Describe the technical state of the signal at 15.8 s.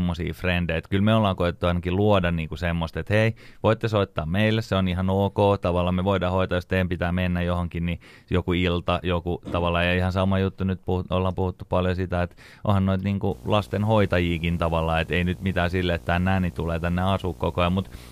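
At 15.8 s the speech sits under video or display buzz, which starts at 13.31 s and runs to the end of the clip. A screen or video cable is coupling into the audio path, adding a buzz at the 59.94 Hz field rate with hash above it and a thin, very high tone at 15.7 kHz from the line scan, roughly 20 dB below the speech. The hash and that line-rate whine set it apart from plain mains hum.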